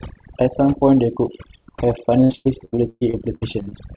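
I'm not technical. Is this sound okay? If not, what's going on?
No. Two things went wrong.

First, there is overdone noise removal through the whole clip. A noise-reduction tool was set too strong. It switches off any slice of the sound that looks like background noise, and the quieter parts of the speech get caught too. The background drops and breaks up into twinkly specks.

Second, from 2.24 to 3.73 seconds there is repeated packet loss, which gives a robotic sound. The call sent audio in small chunks, and about a dozen of them went missing or arrived too late. The longest gap is about 117 milliseconds. Each time, the system covered the hole by stretching the last bit of sound it had. Over that stretch more than a third of what you hear is this patching, so the speech turns choppy, with pieces missing. The sound also stops at 4 kHz, which is normal for this kind of phone-style call.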